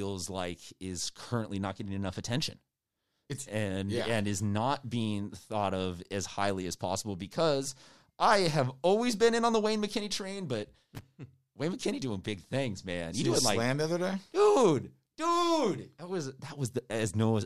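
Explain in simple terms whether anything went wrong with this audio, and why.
Something did go wrong: a loose connector crackle between 10.95 and 11.02 seconds. Somewhere in the cable or plug chain, a worn or dirty contact briefly lost and regained its grip, switching the signal on and off very quickly for about 70 milliseconds. That rapid breaking and remaking chops up the speech, so for that instant you hear a short, ragged burst of scratchy crackle on top of the voice.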